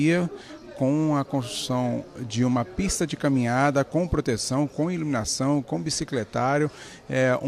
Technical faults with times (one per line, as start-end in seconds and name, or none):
none